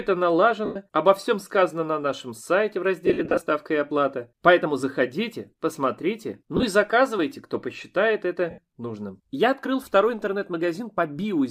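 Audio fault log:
0.65 to 0.76 s, 3.06 to 3.41 s, 6.57 to 6.63 s and 8.50 to 8.58 s, lost LE Audio frames: about 105, 188, 45 and 75 ms of audio went missing, in chunks that fit 7.5 ms frames. The middle two losses are scattered in short runs, the longest around 50 ms. The LC3 decoder fills each gap by repeating the last spectrum with random signs, so tones blur into a noisy smear rather than dropping to hard silence or clicking.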